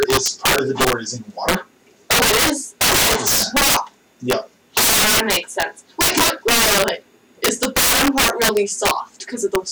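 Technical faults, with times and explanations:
Throughout, integer overflow: harsh cracks on every loud peak, sharper than clipping, as gain about 16 dB too high wraps around 7 percent of samples to the opposite sign.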